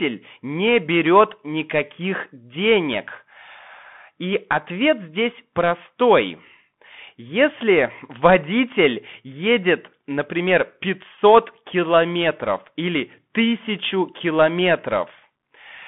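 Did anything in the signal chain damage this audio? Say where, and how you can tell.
Yes. The damage is at the codec stage, for the whole clip. The speech is confined to roughly 150 Hz to 3.5 kHz, sibilants turn scratchy, and a granular hiss sits underneath. That's the Bluetooth CVSD headset codec, whose one-bit delta steps can't keep up with loud high-frequency content.

There's a Bluetooth headset packet repeated around 11.15 to 11.18 s, between "водитель едет например" and "километров или". It's a brief buzz near 267 Hz lasting about 15 ms, which fits four lost packets whose last good bits were decoded again every 3.75 ms.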